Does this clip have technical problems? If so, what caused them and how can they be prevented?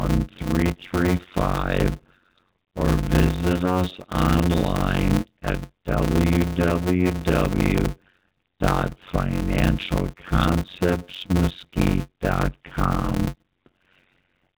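Yes. A block size mismatch (padded) runs through the whole clip. One stage hands over shorter blocks than the next reads, and silence fills the rest of each block. The speech plays at 0.53 times normal speed at roughly its usual pitch, under a steady 91.9 Hz buzz at the block rate, which fits 256-sample blocks going into larger reads. On a waveform, regular flat gaps chop the signal. On a spectrogram, evenly spaced vertical dropouts stripe the speech, whose band, carried by the AMR narrowband mobile codec, ends below 4 kHz. Setting each stage to write exactly the block size the next stage reads would prevent it.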